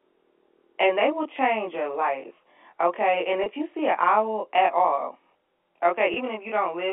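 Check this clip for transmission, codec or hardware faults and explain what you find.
Two faults are present. One runs through the whole clip, and one occurs twice, all over a telephone-band line of roughly 300 Hz to 3.6 kHz.

Channel delay (comb filtering) lasts throughout. One channel arrives about 20 ms late, and the two are summed to mono. Shared content cancels at regularly spaced frequencies, starting very low, near 20 Hz. The speech sounds rough or slightly doubled.

Packet loss with pitch repetition occurs at 3.44 to 3.46 s and at 6.14 to 6.16 s. Each gap is 20 ms, which fits a single lost packet. The receiver repeats the last pitch period to fill it. Each gap is heard as a brief held, buzzy tone.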